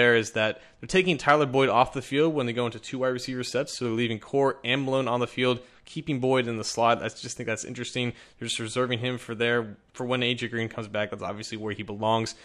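Nothing technically wrong can be heard anywhere in this audio. No moment in it calls for a time or a cause.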